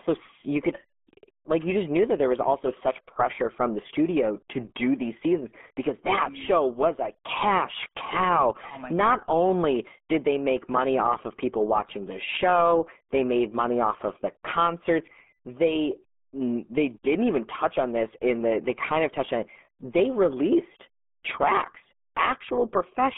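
From start to finish, the speech carries RealAudio 14.4 codec damage. Nothing above 3.8 kHz survives, so the voice is dull and boxed into a telephone band. Heavy coding leaves a muffled, gargling texture. That fits an 8 kbit/s dial-up speech codec.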